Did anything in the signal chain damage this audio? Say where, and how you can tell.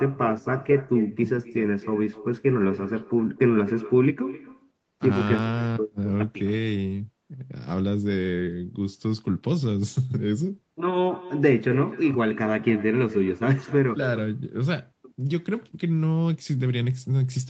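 Yes. The damage is at the call-processing stage, an echo with no canceller. Throughout the speech, every phrase returns about a third of a second later, about 17 dB quieter and thinner. A far-end loudspeaker fed the microphone, and nothing subtracted it.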